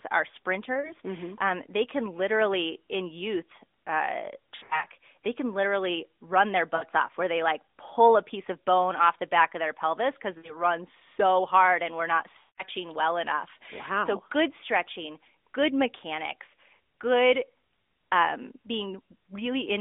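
Lost AMR speech frames hit at 0.74–0.93, 4.56–4.86, 6.76–6.84, 10.38–10.56 and 12.40–12.63 s. Damaged frames failed their checks. The decoder stretched the last good pitch and tract settings at falling gain. Each gap smears and fades, then speech returns briefly rough.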